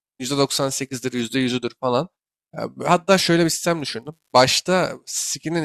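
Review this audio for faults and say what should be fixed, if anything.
An unreliable data bit causes a crackling fizz from 3.33 to 4.37 s in this speech. One data line in the converter or interface is marginal. Its bit reads wrong in a random share of samples. Each wrong sample jumps by the same fixed step, about -42 dBFS. These identical spikes build into a steady crackle. It sits on top of the speech and carries on through any gaps. To prevent it, reseat or replace the faulty cable, connector or converter.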